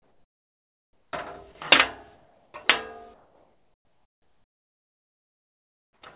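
From 0.0 to 1.13 s, 2.15 to 2.54 s and 3.14 to 6.02 s, comfort noise replaces the background with a flat, featureless hiss about 4 to 7 dB quieter, likely generated by the receiver while the sender paused transmission.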